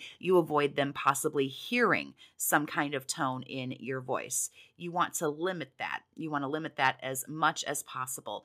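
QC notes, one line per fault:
1.02 s and 2.04 s, microphone volume stepped down: the speech level drops suddenly by about 2 dB each time, likely the call software cutting the input volume in one step.
1.07–1.10 s and 6.84–6.87 s, microphone overload: peaks cut off flat, about 3 dB and 2 dB over the limit, giving a harsh crackle, likely from input volume set too high.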